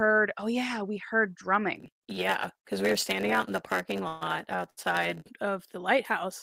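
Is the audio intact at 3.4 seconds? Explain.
No. From 1.75 to 5.30 s, between "oh yeah we heard" and "of the", a block size mismatch (padded) zero-fills the tail of every block. This produces a 91.9 Hz buzz and stretches the speech to 0.919 speed, about 8% slower, at roughly normal pitch.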